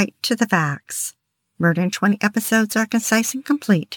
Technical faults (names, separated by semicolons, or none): crude rate conversion